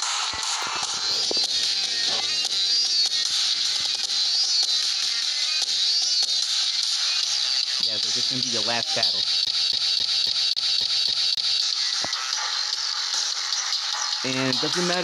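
From 9.45 to 11.62 s, the CD is stuck on one turn. A scratch keeps knocking the laser back one track. The same 271 ms of sound repeats eight times, with a brief mute at each jump. It is a fast, even skipping stutter.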